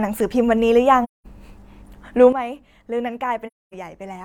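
Speech recording with two kinds of fault. AAC frame loss with muting opens a hole from 1.03 to 1.26 s and again from 3.47 to 3.75 s, about 0.21 s and 0.26 s of missing audio, which points to runs of five and six lost frames. The decoder zeroed those frames' spectra, so the overlapping windows fade the sound out and back in rather than cutting it, giving a soft-edged silence where speech and background vanish together and then return at their former level. A sudden gain jump comes at 2.33 s. Speech and background noise drop together by about 12 dB in a single step and stay there to the end of the clip, which points to a gain setting or bit shift applied without a ramp. The lasting level drop and its hard edge set the gain jump apart from the frame losses, which fade rather than step and leave the level unchanged once the sound returns.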